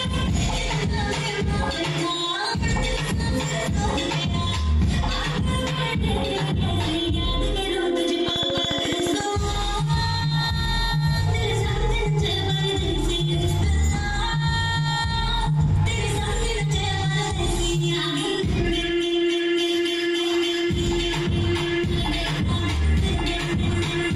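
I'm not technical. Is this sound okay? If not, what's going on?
No. From 8.28 to 9.21 s there is a train of clicks: about fifteen sharp, evenly spaced ticks, roughly 14 per second, sitting on top of the sound and clearly louder than it. Because each click has the same shape and they arrive at a steady rate, this is a repeating electrical pulse, not part of the recording itself. The likely cause is interference from nearby equipment or a faulty connection or power supply.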